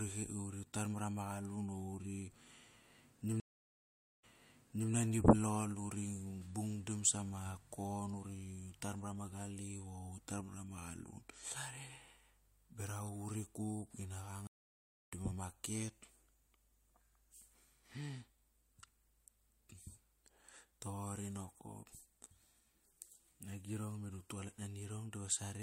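At 3.4 s the speech cuts out for 0.83 s in a stream reconnect: the connection dropped, the player reconnected and started a new decoder mid-stream, and when audio returns at 4.91 s it has jumped back 0.68 s, repeating material as the server resends a burst. A second reconnect at 14.47 s leaves 0.64 s of silence, and playback resumes at 15.12 s roughly 0.4 s further on, so a short stretch of speech is skipped.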